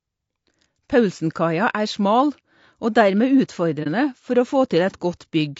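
Throughout the speech, the coding points to low-delay AAC compression, likely AAC-ELD at a rate around 32 kbps. Its short frames resolve the pitch harmonics coarsely and starve them of bits, so the voice sounds rough and grainy, with noise filling between harmonics.

From 3.83 to 3.87 s there is AAC frame loss with muting. A block of coded audio went missing, and the decoder zeroed its spectrum rather than guessing at it. The overlapping windows fade the sound out and back in, leaving a brief dip.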